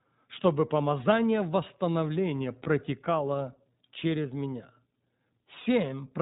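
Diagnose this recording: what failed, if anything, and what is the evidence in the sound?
iLBC codec throughout, at the codec stage: nothing above 4 kHz survives, and speech sounds slightly rough and synthetic, which fits the 15.2 kbps mode with 20 ms frames.

Lost iLBC frames at 2.64 to 2.68 s, just after "чтобы помазание восстановления", at the network stage: the decoder repeats the last pitch cycle plus noise, heard as a brief buzzy held vowel.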